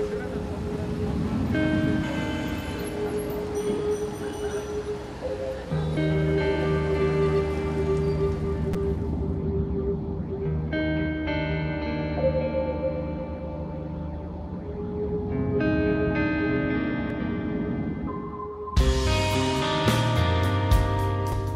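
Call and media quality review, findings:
Damaged data in a compressed stream: brief chirp/blip at 5.94–5.97 s, 8.72–8.76 s, 17.10 s, 21.30–21.33 s. Decoder misreads corrupt frames and resyncs. Spectrogram: thin vertical broadband smear; waveform: abrupt discontinuity, roughly 36 ms wide except the 17.10 s event.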